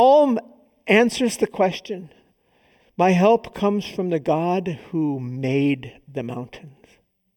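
From start to finish the speech has channel delay comb filtering. One channel runs late by something under half a millisecond, and when the two are folded to mono, whatever they share cancels at evenly spaced frequencies. The first notch sits around 1.5 kHz, with more repeating above it, roughly every 3 kHz. That puts a fixed scoop in the presence range, so the voice comes across hollow and a bit phasey, like it's talking through a tube.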